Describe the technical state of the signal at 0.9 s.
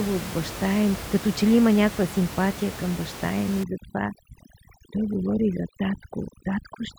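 At 0.9 s the speech signal is intact, with only the room's own background noise sitting about 13 dB beneath the voice.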